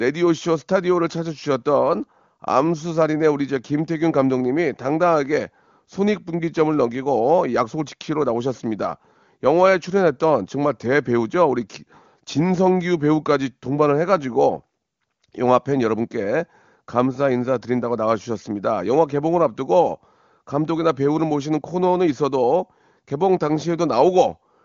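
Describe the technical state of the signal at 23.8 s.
At 23.8 s the signal is intact, with the speech carried cleanly through the AMR wideband (HD Voice) codec, whose band limit leaves nothing above about 7.3 kHz and whose coding damage is faint at most, which fits a high rate near 23.85 kbit/s.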